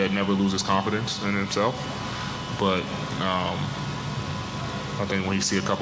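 Nothing stood out on listening, and the audio carries the band-limited sound of a call path, with nothing above 8 kHz, which fits a G.722 wideband codec at 64 kbps.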